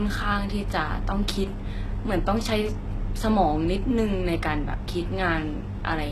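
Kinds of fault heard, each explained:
HE-AAC compression: treble sounds plainly synthetic and metallic, with nothing above 12.3 kHz. That's likely spectral band replication rebuilding the top from lower bands, pointing to roughly 16 kbps.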